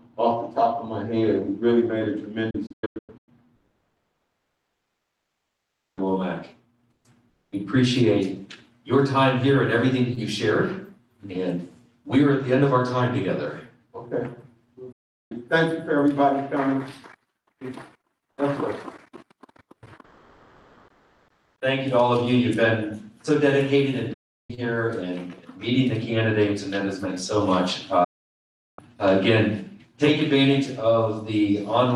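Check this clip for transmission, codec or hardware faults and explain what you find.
Four digital broadcast dropouts interrupt the audio. The first, from 2.50 to 3.29 s, breaks into several short silent holes spread over about 770 ms, the longest about 96 ms, totalling roughly 450 ms lost. Further single gaps follow at 14.92 to 15.32 s (about 380 ms), 24.14 to 24.50 s (about 350 ms) and 28.04 to 28.79 s (about 740 ms). Each cuts to silence with a very fast fade of about 8 ms and returns abruptly. The receiver muted whenever incoming frames were missing or corrupt, so the programme material during those moments is simply gone. The gap lengths fit whole frames of about 32 ms each.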